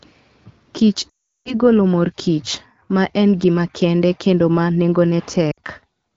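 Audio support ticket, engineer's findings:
Lost AMR speech frames, 1.09–1.60 s before "mor kich ma en": sound dropping to near silence within two frames, consistent with about 18 consecutive 20 ms frames failing CRC. The decoder repeats the last pitch and vocal-tract parameters at decaying gain. A brief repeat at 5.51–5.59 s, roughly 60 ms, three frames lost. Smeared decay, not an abrupt hard gap, separates this from a VoIP jitter-buffer dropout. Wideband codec clear elsewhere, fitting a 12.65 kbit/s AMR-WB mode.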